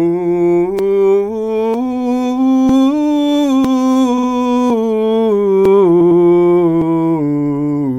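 Audio missing between chunks occurs at 0.79, 1.74, 2.69 and 3.65 s, then 4.70, 5.65 and 6.82 s, spaced about a second apart. About 50 ms of music vanishes at each point and the edges butt together, giving regular skips, likely from a recorder losing samples while switching one-second chunks.

Repeated frames appear from 4.17 to 4.27 s, where a 52 ms block of music plays two extra times, adding about 0.1 s. Again from 6.00 to 6.21 s, a 104.5 ms block repeats twice more, adding 0.21 s. Both are heard as a stutter.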